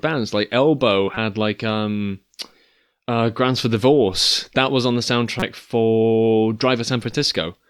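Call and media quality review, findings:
Corrupt frame decoded, 1.14 to 1.17 s: short chirpy burst in the speech, around -15 dBFS, spanning a few codec frames. Decoder played damaged bitstream, misread gains and codes put energy at wrong frequencies.

Corrupt frame decoded, 5.40 to 5.43 s: single-frame squeak, much hotter, near -5 dBFS. Unlike packet-loss concealment, which leaves a smeared or muted gap, this adds new tonal energy that was never in the signal.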